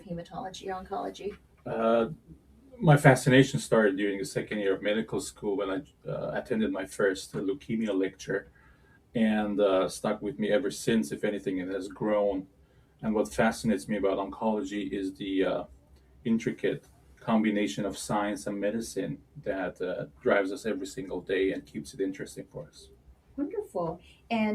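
A noise suppressor applied to music or sounds runs from start to finish. A processor built for speech is treating steady, sustained material as background noise and pulling it down, with the level swinging by around 10 dB as it clamps and releases. Onsets slip through while held tones and decaying tails are pushed under, so the sound pumps and thins, its body and ambience repeatedly collapsing.

Sound cut by the noise suppressor is heard in seven stretches: 0.0 to 2.81 s, 5.32 to 6.07 s, 7.57 to 9.15 s, 12.43 to 13.03 s, 15.67 to 17.25 s, 19.17 to 20.25 s and 21.61 to 24.3 s. In each, the suppressor misreads part of the sound as noise and cuts it by up to about 12 dB, for somewhere between 0.4 s and a second and a half in total per stretch. Sustained and fading parts sink or have their decays chopped short, while sharper attacks survive.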